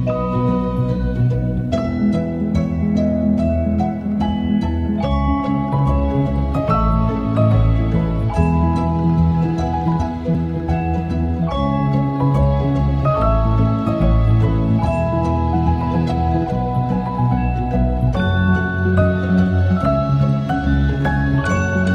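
At 10.34 s a CD skip occurs: the laser lost its track and landed on another turn of the disc's spiral, so playback mutes for a few milliseconds, leaving a short tick, and resumes from a different point, making the sound jump abruptly.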